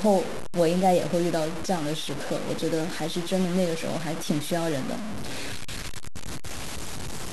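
A coarse, grainy distortion rides on the speech for the whole clip. The grit rises and falls with the level, so softer passages turn harsh and buzzy, and the quietest moments sputter or drop out to silence instead of fading smoothly. The error sits only about 10 dB below the speech. This points to low bit depth without dither: the samples were likely truncated to very few levels, which fits roughly 4 bits, so the rounding error tracks the signal instead of forming a steady hiss.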